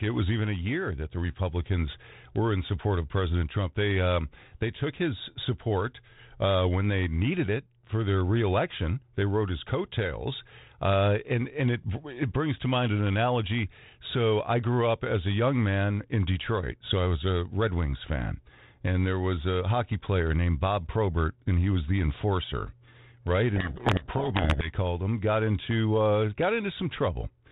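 A codec payload misread runs from 23.56 to 24.74 s: the G.726 code words arrive with their bits in the reverse order from what the decoder expects. The speech is buried under harsh distortion until the packing agrees again. The rest carries the light coding damage of 32 kbit/s G.726.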